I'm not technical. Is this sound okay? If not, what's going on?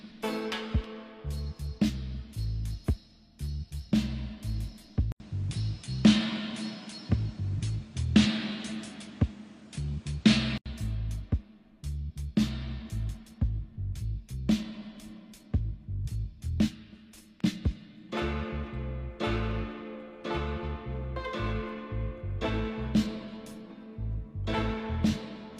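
No. From 5.12 to 10.66 seconds the sound turns duller and flatter, losing its brightest, crispest parts, with nothing above 10.5 kHz. A brief gap of about 80 milliseconds marks the change. The loudness shifts a little, and a faint new background noise appears. This is likely an input switched to a poorer device, such as a different microphone or a headset. At 10.66 seconds the clearer sound returns.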